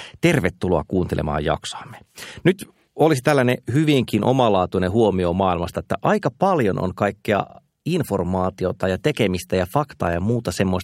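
Repeated frames at 7.49 to 7.59 s, just after "aika paljon on kaikkea": a 52.2 ms block of speech is played twice more, which fits two compressed frames sent again. It sounds like a stutter before "informaatiota ja tekemistä ja" and adds 104.5 ms.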